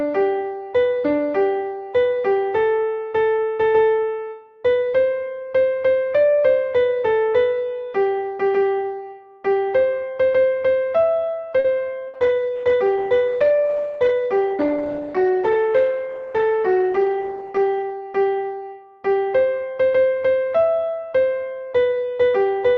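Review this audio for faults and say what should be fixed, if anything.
At 11.59 to 11.76 s there is a short stall from a late packet. A packet arrived late, the jitter buffer ran dry, and the receiver stretched the last sound for about 50 ms before carrying on from the same point, so the sound hangs too long. Nothing is skipped, which is what separates it from a loss burst, though the call's delay grows by 50 ms. A slightly deeper jitter buffer target, or steadier network timing, would prevent it.

At 12.08 to 12.17 s a burst of packet loss removes 60 ms of audio. The receiver extended the last sound and faded it over the gap, then resumed further along with that stretch gone. Unlike the stall a moment earlier, the sound jumps ahead rather than picking up where it paused, so a short piece is missing. Forward error correction or redundancy in Opus, together with a more reliable network path, would prevent it.

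From 12.10 to 17.95 s a call bitrate drop takes Opus from 32 to 14 kbps. The encoder also narrows its bandwidth from 12 kHz to 8 kHz, so the sound turns rough and muffled and stays that way for nearly 6 seconds before clearing. A lost packet gives a brief glitch, whereas this is a steady loss of clarity and top end across several seconds. Giving the call more headroom and a congestion controller that recovers bitrate faster would prevent it.

At 14.45 to 14.86 s there is a jitter buffer speed-up. With more audio queued than the buffer aims for, the receiver cut short pitch-period pieces many times in a row, removing about 70 ms. The sound runs at 113% speed with no change in pitch, so it feels hurried. That steady rush at unchanged pitch separates it from a loss burst, which skips a single chunk. Smaller, smoother buffer adjustments spread over a longer span would prevent it.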